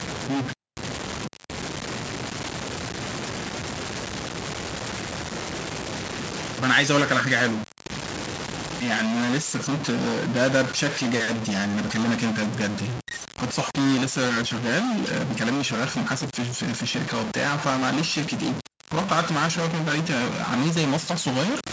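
From start to finish, the speech carries a distortion. It rides on every sound and never lets up. The pauses are not clean either. They fill with a steady hiss and grit instead of falling quiet. This points to a stuck bit, likely one data line held at 0 or 1 in the converter or its wiring. About half the sample values land wrong by that bit's weight, so the error follows the waveform. Near silence it flips with the sign, which is the noise heard in the gaps. The call microphone processing can be heard too, with its low bass trimmed and nothing above 8 kHz.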